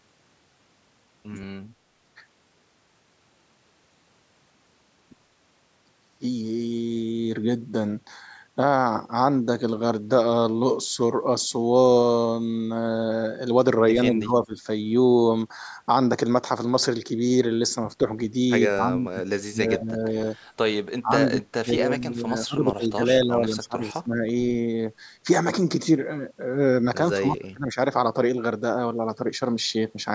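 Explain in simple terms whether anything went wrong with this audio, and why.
Two things went wrong. Throughout the recording the speech has a hollow, phasey quality. This is channel delay (comb filtering): one channel arrives a fraction of a millisecond after the other, and when the two are combined into one, parts of the sound cancel at evenly spaced frequencies. The first cancellation falls around 3 kHz, right where speech clarity sits.

Second, the voice drops away in places: at 14.11 to 14.54 s, 18.71 to 19.24 s, 19.44 to 20.27 s, 20.71 to 20.84 s, 21.01 to 21.13 s, a long stretch from 21.31 to 24.26 s, and 27.15 to 27.77 s. The likely cause is speech suppressed in double talk. When both people speak at once, the call's echo canceller can't tell this talker from the echo of the other side, so it turns the voice sharply down until the overlap ends.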